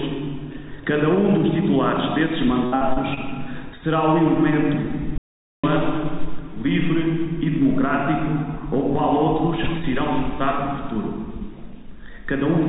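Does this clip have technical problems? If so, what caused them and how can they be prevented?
Yes. From 2.66 to 3.19 s the sound turns choppy, with four short holes in about half a second, the longest 62 ms. This is repeated packet loss: audio packets kept going missing or arriving late, and each hole was patched by stretching the last bit of sound, so about a third of that span is concealment rather than real audio. Prevent it by using a steadier network connection, adding forward error correction, or giving the jitter buffer more room.

At 5.18 s the audio cuts to total silence for about 456 ms, returning at 5.64 s with no room tone at all in the gap. This is an audio dropout to silence, most likely caused by the input briefly being lost through a loose connection, a failed link or an accidental mute, while the recorder kept writing silence. Whatever happened in that half-second is gone. 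Prevent it by securing cables and connections and checking mute controls before recording.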